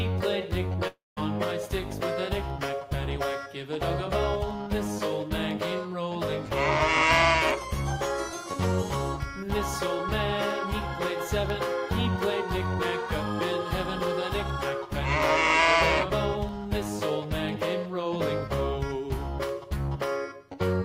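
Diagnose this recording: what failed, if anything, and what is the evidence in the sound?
Two things went wrong here. First, periodic USB or driver dropouts: from 0.51 s to 20.49 s there's a tiny tick once a second, about twenty in all, each a sliver of silence around a tenth of a millisecond long. That regular spacing points at the driver or buffer stage, where something keeps stalling the USB bus or audio driver on a fixed timer and a few samples get dropped each time. The ticks only show up where there's signal underneath.

Second, between 0.87 s and 1.19 s the sound stops arriving. For about 290 ms it's patched over: the last bit of sound carries on as a fading buzzy hiss, and about 180 ms of that is basically silence. Then the audio picks up again with roughly 300 ms gone for good. That's likely a long network dropout, with the receiver filling the gap by extending the last sound until it fades out.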